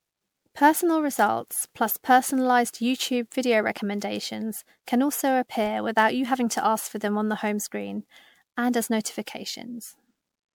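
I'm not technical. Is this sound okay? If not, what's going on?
No, not quite. All the way through, the speech has a swirly, watery, hollow sound, and the starts of sounds feel smudged rather than crisp. That's what's called generation loss. The likely cause is that the recording was saved as an MP3 over and over, something like seven times. Each save throws away a bit more detail in slightly different places, so the damage stacks up, like photocopying a photocopy.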